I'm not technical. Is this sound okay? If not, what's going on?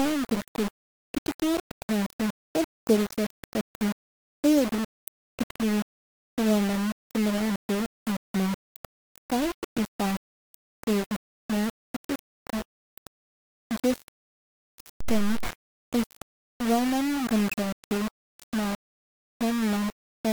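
No. From start to finish the speech has a harsh, grainy roughness, and the most likely cause is low bit depth without dither. The sound was stored with very few loudness steps, which fits about 4 bits, and each moment was rounded to the nearest step. The grit is strong, though still clearly quieter than the voice itself. Unlike steady background hiss, it rises and falls with the speech.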